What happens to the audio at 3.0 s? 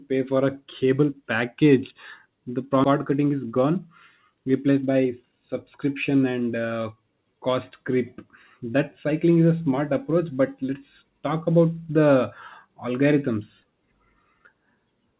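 At 3.0 s the speech is inside a jitter buffer speed-up running from about 2.94 s to 3.81 s. The receiver's buffer had built up more audio than its target, so it repeatedly cut out short pieces of one or a few pitch periods to drain the excess, removing roughly a tenth of a second in total. The passage plays at about 110% speed with unchanged pitch and sounds hurried.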